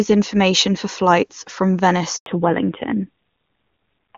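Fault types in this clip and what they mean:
Handover gap: the call switched networks and no speech frames arrived, so the voice cuts out for 100 ms after "information for flights from", a flat silent stretch in the waveform.
Fallback to narrowband: the call dropped from HD Voice at 23.85 kbit/s to narrowband AMR at 7.4 kbit/s, so from 2.26 s the spectrogram shows nothing above 4 kHz and the speech sounds duller.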